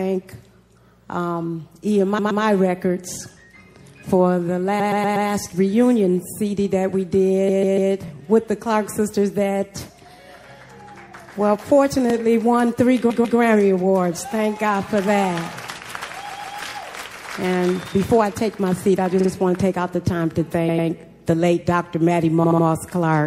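Throughout the audio the treble is cut short and the texture turns watery and swirly. Sibilant and bright sounds chirp metallically, and attacks smear. This is likely MP3 compression at a low bitrate, around 64 kbps. The encoder runs short of bits, so it drops the top band and switches weak frequency lines on and off between frames.

At 2.17 to 2.41 s a 120 ms block plays three times in a row. These are repeated frames. The same compressed data reached the decoder more than once, so a short stretch is heard again as a stutter. Here the repeats add 240 ms.

At 3.14 to 3.17 s there is a brief click and stutter from overlapping chunks. The audio was handled in 4-second chunks. Each new chunk began about 23 ms before the previous one ended, so that sliver plays twice at the join.

Repeated frames return at 4.79 to 5.27 s, where a 120 ms block plays five times and adds 480 ms. At 7.48 to 7.91 s a 144 ms block plays four times. 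Each block fits a run of a few MP3 frames.

The second overlapping-chunks click falls at 12.10 to 12.12 s.

Repeated frames stutter again at 13.09 to 13.38 s, 16.29 to 16.57 s, 19.19 to 19.29 s, 20.68 to 20.87 s and 22.43 to 22.65 s. The repeated blocks range from 48 to 144 ms. Each repeat lengthens the audio.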